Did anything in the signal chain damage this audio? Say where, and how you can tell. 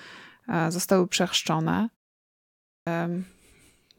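Yes, there's a clipped start after a pause, and it sits at the playback end, in the output device. After a silence of about 0.86 s, the speech comes back at 2.74 s with its onset missing. Roughly 127 ms is gone, up to 2.87 s, so the first sounds are chopped and it jumps in abruptly. The device dropped into a low-power state during the gap and was still waking or relocking when the signal resumed, so that opening chunk never reached the output.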